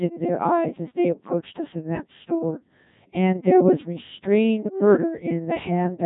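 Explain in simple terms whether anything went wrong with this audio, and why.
The whole clip has gone through the Codec 2 vocoder, a very low-rate radio codec, and it's heavily damaged. It keeps only rough pitch and tone outlines and rebuilds the speech from tones, so from start to finish it sounds robotic and buzzy.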